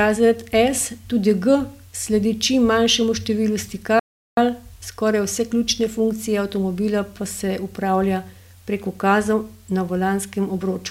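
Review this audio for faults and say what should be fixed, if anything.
The player likely ran short of buffered data or had its audio thread blocked, causing a playback stall from 3.99 to 4.37 s. After "sledi čim manjšemu številu" the speech drops to silence for 0.38 s, then carries on with "skoraj vse ključne funkcije". A deeper playback buffer and an audio thread kept free of blocking work would prevent this.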